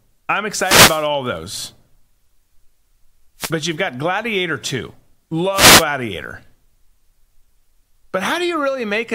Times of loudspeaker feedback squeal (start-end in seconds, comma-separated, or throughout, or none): none